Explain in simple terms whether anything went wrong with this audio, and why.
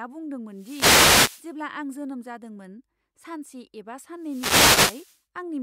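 Two bursts of static hit the speech, from 0.51 to 1.54 s and from 4.18 to 5.22 s. These are wireless microphone noise hits. The microphone's radio signal briefly faded, so receiver hiss rose over the voice. The first ends just before "आं जोनोम जादोंमोन".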